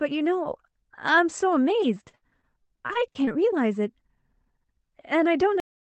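From 1.81 to 3.39 s there's repeated packet loss, giving a robotic sound: twelve short holes, the longest about 62 ms, each patched by stretching the last bit of audio, so the speech goes choppy, with pieces missing. Then there's a cut-off end at 5.60 s, where the final buffers never made it out and the audio drops straight to digital silence with no decay.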